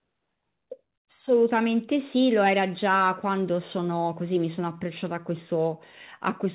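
Nothing here counts as a fault: the speech has come over a WebRTC call path and stops at about 4 kHz, as you'd expect from a G.711 mu-law call codec.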